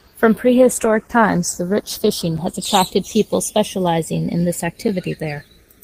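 Throughout the speech, the two channels are drifting apart. The two channels came from devices on independent clocks, with an error on the order of 70 parts per million. The inter-channel delay creeps up to roughly half a millisecond by the end. Folded to mono, this moves comb-filter notches slowly through the spectrum, and the result is a gradual flanging rather than a fixed colouration.

From 0.46 s to 3.62 s there is a call bitrate drop. The speech becomes coarser and loses top-end detail, and the texture turns watery. The worst stretch lasts about 1.84 s before quality climbs back. The change in sound suggests the encoder was pushed from around 32 kbps down to around 14 kbps after the bandwidth estimate fell. At that rate Opus quantises more crudely and narrows the coded band, which explains the dullness.

At 2.37 s and again at 4.88 s, just after "in this", there is a gap between chunks. 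Each is a hole of about 6.5 ms, and the two are spaced 2.5 s apart. That spacing points to audio delivered in 2.5 s blocks, with a sliver of silence inserted at each join. Nothing is lost from the speech, but the flow is briefly broken at each boundary.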